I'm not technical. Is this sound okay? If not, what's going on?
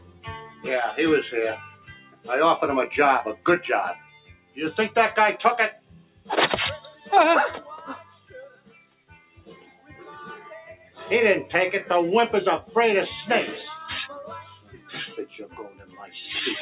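No. A noise suppressor applied to music or sounds was left running the whole time. It is built for speech, so it treats steady, held sound as background noise and keeps turning it down. The level pumps up and down, and lingering sound thins out.

That shows up as sound cut by the noise suppressor at 0.0–0.66 s, 1.63–2.28 s, 3.35–4.58 s, 5.73–6.29 s, 6.92–7.09 s, 8.03–9.96 s, 10.75–10.97 s and 14.43–16.14 s. Unlike a dropout, the sound sinks rather than vanishing, and sudden hits still come through while the held parts fade away.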